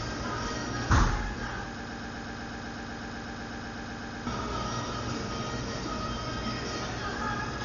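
From start to finish the sound is dull and grainy, most likely from heavy Dolby Digital compression at a very low bitrate, consistent with roughly 40 kbps. The encoder has cut the band so that nothing remains above 7 kHz. Many of the frequency lines below that were given no real detail, and the decoder filled them with noise, which gives a rough, fluttering texture. A spectrogram shows a flat ceiling at 7 kHz and blotchy, speckled energy beneath it.

From 1.80 s to 4.27 s a broken-record loop takes over. A fragment about 0.12 s long plays back to back 20 times, a rapid mechanical stutter, and the audio that belonged in those two and a half seconds never arrives. The likely cause is a stalled player or stream resending the last piece it held. On the waveform the same short shape tiles identically across that span, and the spectrogram shows evenly spaced vertical seams.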